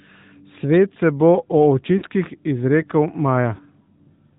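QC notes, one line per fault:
Throughout: AMR narrowband mobile codec. The band stops hard at 4 kHz on the spectrogram, and the buzzy, synthetic timbre points to a mid-rate mode of about 10 kbps.
1.98–2.03 s: lost AMR speech frames. The decoder stretches the last good sound and fades it over 40 ms, fitting two dropped frames, which shows as a smeared, decaying spectrogram patch.
3.56–3.60 s: lost AMR speech frames. A single 20 ms concealment gives a brief warbly dip, seen as a short amplitude sag in the waveform.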